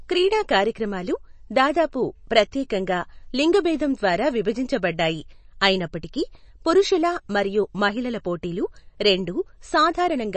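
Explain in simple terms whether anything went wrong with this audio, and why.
Throughout the speech, nothing above 8.3 kHz remains and a watery, swirly texture is plainly audible, likely from MP3 compression discarding detail to save space.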